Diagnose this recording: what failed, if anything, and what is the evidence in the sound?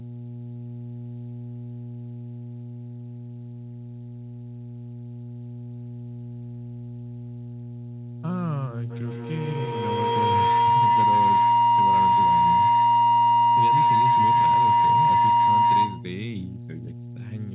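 Mains hum runs through the whole speech clip. It is a steady 60 Hz tone with low harmonics, loud and close to the speech level. The fault sits in the analogue wiring, where a ground loop or nearby transformer couples the power line into the signal.

Feedback howl starts at 8.9 s and lasts until 16.22 s. The tone centres near 1 kHz, with the loop repeating roughly every 150 ms. It peaks about 11 dB above the speech. Two devices in one room share the call. Each trip through microphone and loudspeaker gains level until the loop rings.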